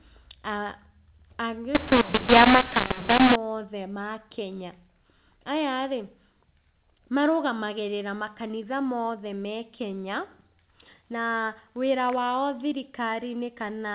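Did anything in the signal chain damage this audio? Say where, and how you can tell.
Yes. At the codec stage, from 1.75 to 3.36 s, A-law telephone samples are decoded as mu-law: mu-law and A-law mixed up. Speech turns harsh and distorted, levels jump unevenly, and pauses fill with noise, then clean G.711 A-law decoding resumes.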